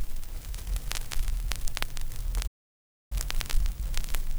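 At 2.47 s the sound cuts out abruptly and stays silent until 3.12 s, a gap of about 0.64 s. This is a playback stall, most likely the player running short of data or having its output thread held up, so nothing reached the output until it recovered. On a waveform the trace drops to a flat line for that span. A spectrogram shows a clean vertical band with no energy at any frequency.

From 3.12 s to the end, the audio resumes but runs at 1.1 times normal speed. That is catch-up at higher speed: the player works through its backlog by resampling faster, so pitch rises with tempo, roughly one and a half semitones. Events sound hurried and slightly higher. On a spectrogram, harmonics and other frequency features sit proportionally higher and look compressed in time. The waveform's features are packed more tightly than in the first 2.47 s.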